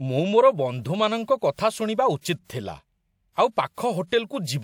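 At 2.44 s and again at 4.07 s there's pre-echo: the codec smears quantisation hiss about 50 ms ahead of each attack, softening its onset.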